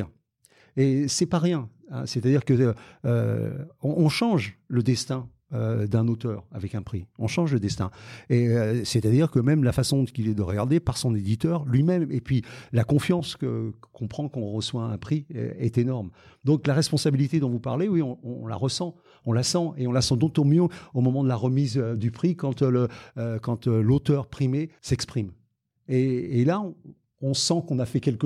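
No technical faults are audible.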